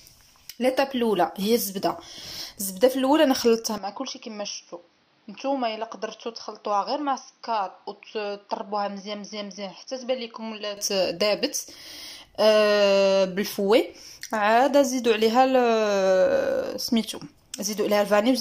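At 3.78 s the sound abruptly turns duller and boxier, drops about 5 dB, and gains faint new background noise, with nothing above 6.2 kHz, until it clears at 10.77 s. The likely cause is an input switched to a poorer device.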